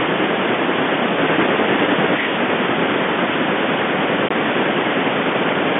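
A CD skip at 4.29 s: the player's laser jumped to another turn of the disc's spiral, so the speech mutes for about 20 ms, then resumes from a different point, jumping forward or back by one or more disc turns, over telephone-band audio.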